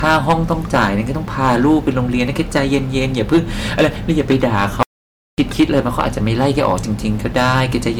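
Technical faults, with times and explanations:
Throughout, hard clipping: the speech was driven about 10 dB past what a stage could pass, flattening around 2% of samples, so peaks crackle with harsh fuzz.
Throughout, generation loss: likely repeated MP3 re-encoding at 128 kbit/s, roughly five passes, piling up quantisation noise, leaving the speech swirly, hollow and smeared at attacks.
4.83–5.38 s, playback stall: the player likely starved of data or was blocked, so output goes silent for about 0.55 s mid-flow before the speech resumes.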